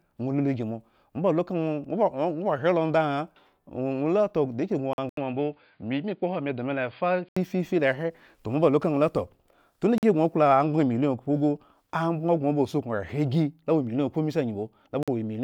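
Speech with a gap between chunks at 4.93, 9.98 and 15.03 s: hard-edged holes of about 48 ms recurring every 5 s, which fits audio delivered in 5-second chunks with silence padded at each join. On a waveform these show as flat near-silent slots; on a spectrogram, clean vertical blank stripes. From 5.09 to 7.37 s the sound turns dull and band-limited, with nothing above 4.9 kHz. An 80 ms silence opens the segment and a faint noise floor about 50 dB down comes in, while loudness stays roughly the same. The likely cause is that the input switched to a poorer device. A spectrogram would show the upper band abruptly cut off across that stretch.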